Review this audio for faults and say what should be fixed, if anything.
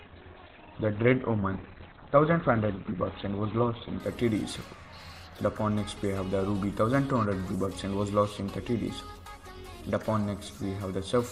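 Adaptive stream starting at a low bitrate: the player opened on a low-bitrate rendition and switched up at 4.0 s. Until then nothing sounds above 4.4 kHz, with heavier codec artefacts, which fits roughly 12 kbit/s Opus stepping to around 64 kbit/s; quality then jumps without a gap. Start playback on a higher-bitrate rendition, or buffer briefly to measure bandwidth first.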